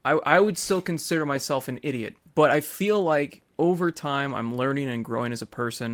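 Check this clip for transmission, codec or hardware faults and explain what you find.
Nothing stood out on listening to this speech recording.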